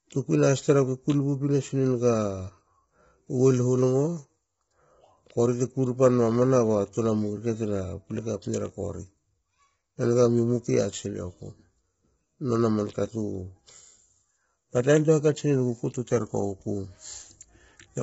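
Speech throughout sounds rough and grainy, with noise between the harmonics and nothing above 7.7 kHz, likely from heavy low-delay AAC compression, consistent with AAC-ELD at about 16 kbps.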